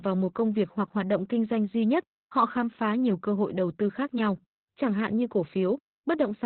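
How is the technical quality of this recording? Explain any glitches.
Quality's pretty rough: it's low-rate voice coding from start to finish. That's Opus voice compression in its SILK mode, squeezed down to narrowband, so nothing makes it past about 4.2 kHz, and the excitation is coded so coarsely that the speech sounds muffled, hoarse and a bit robotic, which fits a bitrate around 8 kbps.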